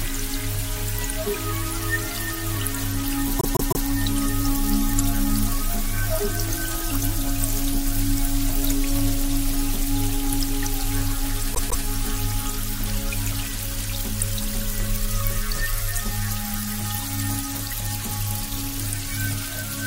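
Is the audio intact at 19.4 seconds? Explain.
Yes, at 19.4 s the audio plays through cleanly, with no dropout, click, distortion or other fault at that moment.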